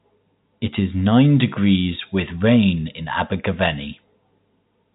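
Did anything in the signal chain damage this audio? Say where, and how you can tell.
No, the speech sits in the narrow band below 4 kHz with a faint, level-following hiss about 38 dB down, which is just what G.711 telephone coding does to a line, and nothing in the chain goes beyond that.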